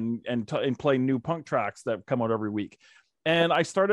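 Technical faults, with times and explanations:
Nothing stood out on listening to this speech recording.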